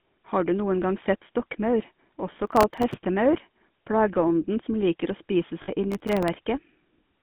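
Throughout, the speech has a buzzy, gravelly roughness and a narrow band, from about 150 Hz to 3.5 kHz with nothing above. This is GSM full-rate codec damage, consistent with the 13 kbps coder rebuilding the voice from a vocal-tract model and a sparse pulse excitation.

From 2.47 to 2.94 s a gritty crackle tears across the sound, and it returns from 5.92 to 6.28 s. This is processor overload crackle. Repeated missed deadlines each splice in a sliver of old audio with hard edges, consistent with a buffer well under a millisecond.

Between these, from 5.62 to 5.69 s, the sound briefly freezes into a rough, metallic ring lasting 60 ms. These are lost GSM frames, consistent with about three 20 ms frames. The decoder repeats the last good frame's settings to fill the gap.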